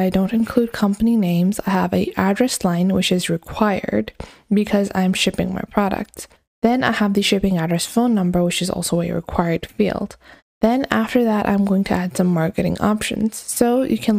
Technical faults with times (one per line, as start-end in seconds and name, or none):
none